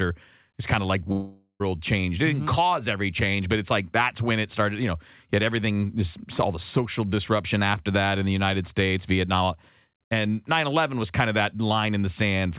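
Right after "kind of like", from 1.12 to 1.62 s, the speech smears into a fading buzz, then briefly goes silent; likely a long network dropout concealed by the receiver. Nothing is heard above 4 kHz.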